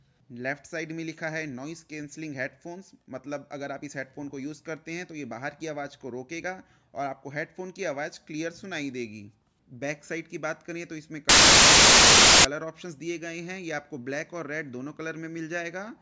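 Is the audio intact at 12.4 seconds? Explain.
No. From 11.29 to 12.45 s the file's tags are being played as audio: an embedded cover picture, stored as compressed data, is read as if it were samples. Because compressed bytes are close to random, they come out as a burst of very loud white noise with abrupt start and stop edges. Unlike a codec glitch or packet-loss artefact, which is brief and smeared into the surrounding sound, this is a flat wall of static lasting over a second.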